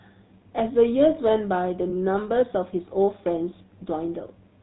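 Across the whole clip, the speech carries the sound of the GSM full-rate codec. It models the vocal tract and excites it with a sparse, regularly spaced pulse train. Nothing survives above 4 kHz. The result is a plainly audible buzzy, gravelly roughness on every voiced sound. The band limit and coarse texture fit the older 13 kbps full-rate coding. Sibilants lose their crispness, and higher-pitched parts roughen most.

From 1.90 to 1.93 s there is a lost GSM frame. The decoder could not use that stretch. So it reused the settings of the last good frame. The gap is short, consistent with a single 20 ms frame. It is heard as a brief metallic ring. The sound holds on one rough, smeared tone instead of moving on. The gap is too short to fade into silence.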